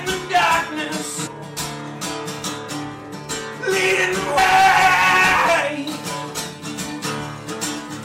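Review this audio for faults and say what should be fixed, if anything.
Damaged data in the compressed stream causes brief glitches at 1.26–1.28 s, 4.37 s and 6.34 s, where the decoder misreads corrupted frames and resynchronises. Fix by transferring with checksums and re-fetching from an intact source.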